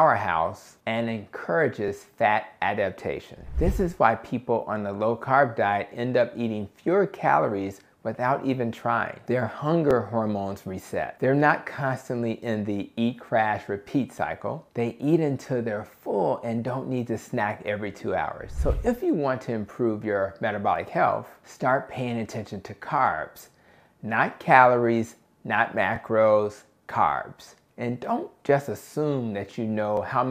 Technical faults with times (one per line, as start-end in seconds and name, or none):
1.88 overlapping chunks
5.89 overlapping chunks
9.91 overlapping chunks
13.92 overlapping chunks
17.93 overlapping chunks
21.95 overlapping chunks
25.96 overlapping chunks
29.97 overlapping chunks